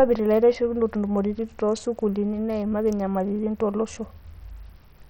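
Throughout, likely Bluetooth SBC compression with a starved bit pool, fitting about 64 kbps, leaves the speech with flickering treble, gritty quantisation noise and aliasing.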